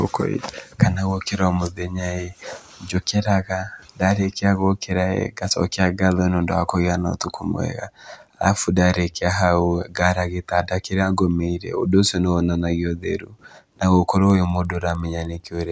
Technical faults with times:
14.30-15.72 resampler restarted on every block

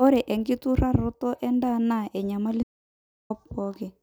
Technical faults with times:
2.63-3.30 audio dropout to silence

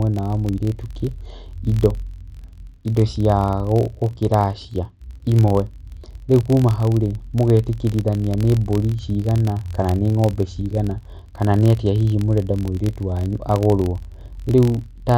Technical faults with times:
0.00-15.18 filter restarted on every block

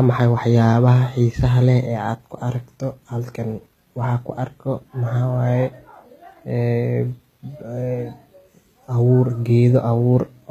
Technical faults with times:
0.00-10.51 HE-AAC compression

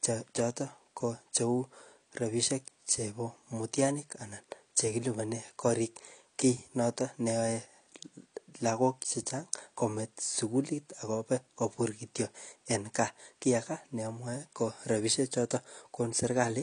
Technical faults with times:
0.00-16.62 AAC compression

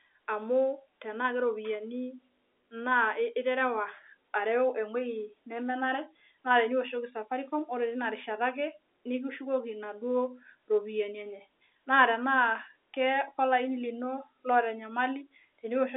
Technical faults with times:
none

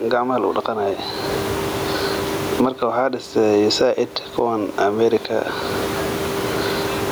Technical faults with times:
0.00-7.11 gain pumping

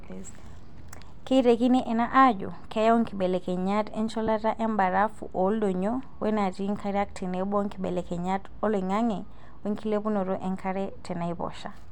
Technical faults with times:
4.27 lost LE Audio frames

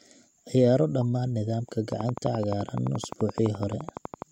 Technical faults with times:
1.92-4.23 train of clicks

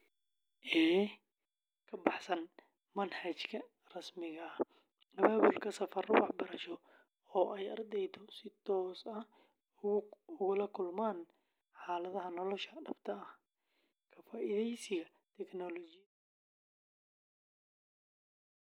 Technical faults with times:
none

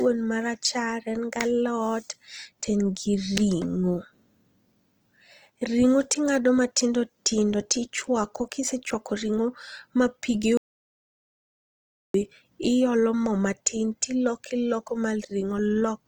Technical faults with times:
0.00-16.08 Opus compression
10.57-12.14 audio dropout to silence

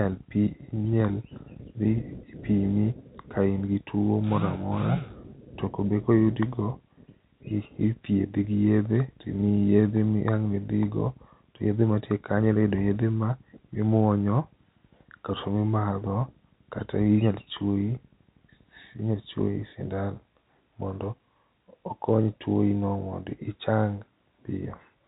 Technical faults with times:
none

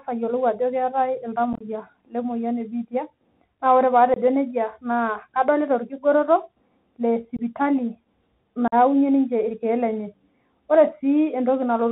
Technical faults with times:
0.00-11.91 Bluetooth CVSD headset codec
1.53-1.63 unconcealed Bluetooth headset packet loss
4.14-4.17 unconcealed Bluetooth headset packet loss
7.37-7.39 unconcealed Bluetooth headset packet loss
8.68-8.74 unconcealed Bluetooth headset packet loss

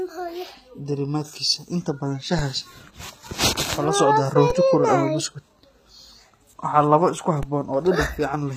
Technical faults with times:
0.00-8.56 HE-AAC compression
2.39 DC step
4.50 DC step
7.43 DC step

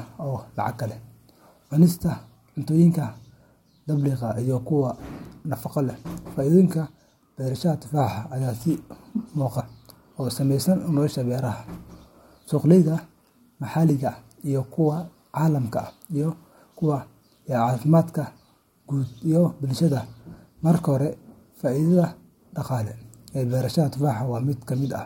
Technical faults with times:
9.59-9.61 damaged data in a compressed stream

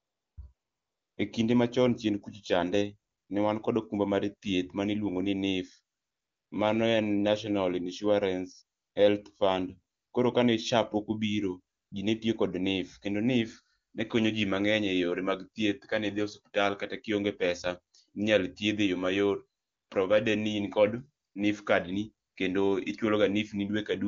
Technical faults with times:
0.00-1.17 AMR comfort noise
3.11-3.29 AMR comfort noise
5.97-6.51 AMR comfort noise
8.79-8.95 AMR comfort noise
9.95-10.13 AMR comfort noise
11.75-11.91 AMR comfort noise
19.61-19.89 AMR comfort noise
21.25-21.35 AMR comfort noise
22.27-22.35 AMR comfort noise

